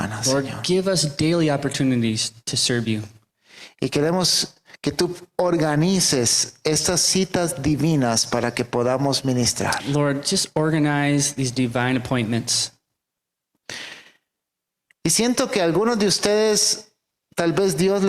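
No technical faults can be heard anywhere in the audio; the signal holds steady and intact for its whole duration.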